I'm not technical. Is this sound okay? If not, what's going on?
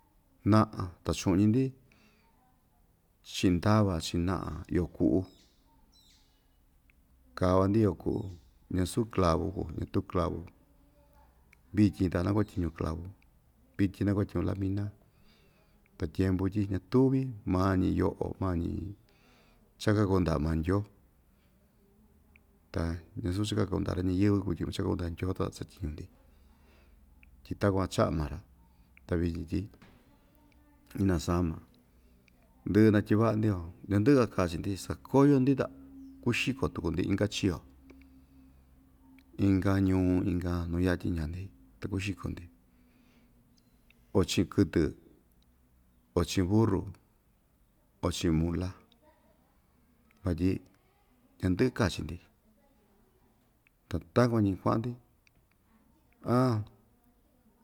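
Yes, it sounds okay, with nothing wrong to hear.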